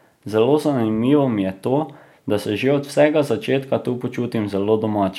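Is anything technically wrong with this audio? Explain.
No, nothing is technically wrong with this audio.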